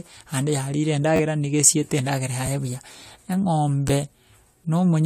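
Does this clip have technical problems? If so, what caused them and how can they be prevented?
Yes. Repeated buffer at 1.16–1.20 s (one ~10.7 ms piece, fitting a 512-sample buffer, plays three extra times), 2.46 s and 3.88 s, each a single replay. Late audio caused it, heard as stutter-clicks. The waveform shows identical copies with hard joins, and the spectrogram shows vertical lines. Larger playback buffers or higher audio-thread priority would prevent it.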